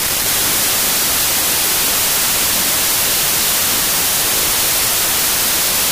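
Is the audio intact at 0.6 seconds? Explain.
No, 0.6 s lies within a wrong sample width fault spanning the whole clip. Each 32-bit sample is read as two 16-bit values, so alternate values are low-byte noise and the speech plays at half speed, an octave low. The waveform is a near-full-scale noise band and the spectrogram shows broadband hiss over faint, downward-shifted harmonics.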